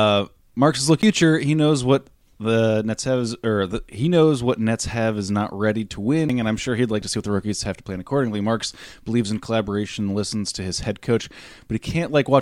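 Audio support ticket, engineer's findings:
CD skip at 1.02 s and again at 6.29 s. Symptom: tick with a brief mute of roughly 10 ms, then speech resumes from a different point rather than where it stopped. Probable component: disc transport, laser pickup jumping track on the spiral after a knock or surface flaw. Distinguishing point: unlike a plain dropout or buffer underrun, the gap is tiny and playback does not continue seamlessly, because the read position itself has jumped.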